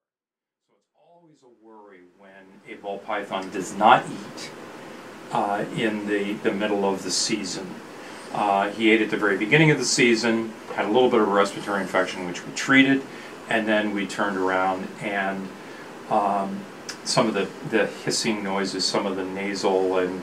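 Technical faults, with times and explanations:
There are no technical faults to list, so there are no times or explanations to give.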